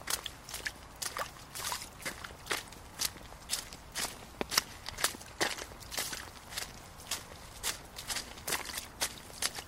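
Short blips of noise break over the sound from 3.83 to 4.32 s and again from 5.82 to 6.31 s. This is DAB burbling, where errors of a few tenths of a percent slipped past error correction and put short blips of noise into individual sub-bands.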